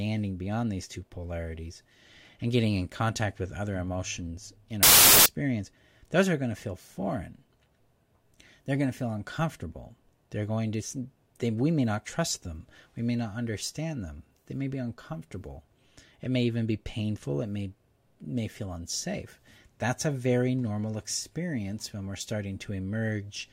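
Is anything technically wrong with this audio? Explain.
Yes. From 4.83 to 5.26 s, right after "with other emotions in", the audio shows a wrong sample width fault. Data packed as 24-bit integers are read as 32-bit ones, so each value straddles neighbouring samples' bytes and only fragments keep the true top bits. The speech plays about 1.33 times too fast and high, buried in loud harsh noise. The waveform jumps to dense noisy hash, and the spectrogram fills with broadband noise across all frequencies.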